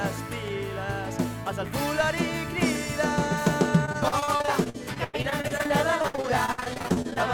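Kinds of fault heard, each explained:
Repeated packet loss (robotic sound): From about 3.85 to 7.18 s, dozens of short dropouts follow one after another, each patched by stretching the last bit of sound. Nearly a third of that stretch is filled in, with gaps up to 94 ms, so it turns choppy and robotic.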